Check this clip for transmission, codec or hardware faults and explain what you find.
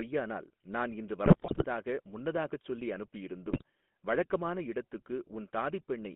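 Two faults are present: a GSM full-rate codec coloring the whole speech clip, and two bursts of GSM bit errors.

Throughout, the speech sounds buzzy and gravelly, confined to a narrow 200 Hz to 3.5 kHz telephone band. This is the GSM full-rate codec, which fits a 13 kbps stream. It rebuilds the voice from a vocal-tract filter driven by sparse, regularly spaced pulses, so fine detail is lost and the rasp is plainly audible.

From 1.24 to 1.64 s, between "நான் இன்று" and "முன்னதாகச் சொல்லி", and again from 3.48 to 3.62 s, the audio breaks into squawks, pops and gargling. These are GSM bit errors, consistent with a few percent of bits flipped. Corrupted filter, pitch and gain values distort the spectrum and level, frame by frame.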